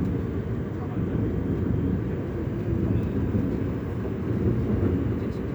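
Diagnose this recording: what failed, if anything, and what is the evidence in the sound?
Nothing failed: no stage from capture through to playback leaves an audible fault anywhere in the sound.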